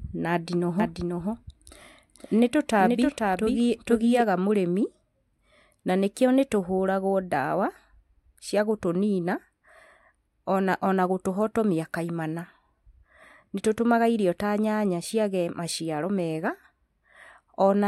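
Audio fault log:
0.80 to 4.24 s, doubled audio track: the speech was most likely captured a second time through a slower path and mixed back in, so a full-band copy trails the original by about half a second at roughly 5 dB lower. Because the copy carries no decay or room colouring, it sounds like a flat second talker repeating each syllable rather than an echo, and it appears and disappears abruptly at both edges of the span.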